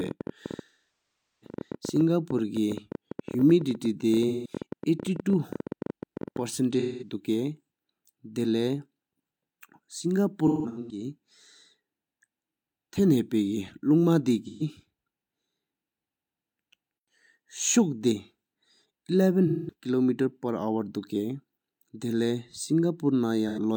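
From the start of the audio to 6.4 s, a train of clicks runs over the speech, likely from electrical interference or a faulty connection or power supply. Roughly seventy similar pulses arrive at an irregular pace averaging 12.5 per second, peaking about 10 dB above the signal and ticking through pauses too.

AAC frame loss with concealment occurs at 0.66–1.54 s, 4.28–4.51 s, 6.79–7.15 s, 10.46–11.04 s, 14.44–14.62 s, 19.47–19.73 s and 23.48–23.59 s. The decoder patched each gap from the last good spectrum. Brief losses sound smeared and phasey. The 770 ms first gap decays toward silence before fading back in. At 10.46 s, short patches scatter, the longest around 150 ms.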